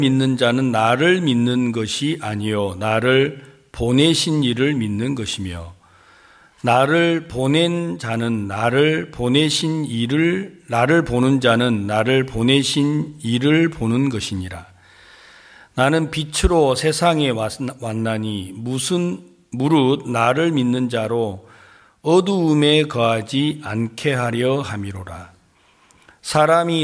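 Nothing stood out on listening to this recording.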